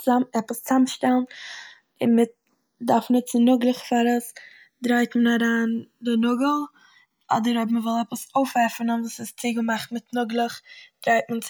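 Throughout the speech, the channels drift apart: separate clocks differing by around 150 ppm let the inter-channel delay grow to about a millisecond and a half. Summed to mono, this gives slow flanging, visible on a spectrogram as comb notches sweeping steadily through the spectrum.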